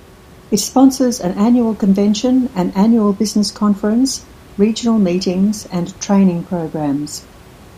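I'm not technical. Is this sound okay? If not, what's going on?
Yes, nothing wrong here.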